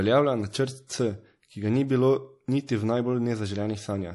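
The speech was likely squeezed through MP3 compression at a low bitrate, plainly audible throughout: treble stops at 11.4 kHz, with watery, swirling artefacts and smeared consonants.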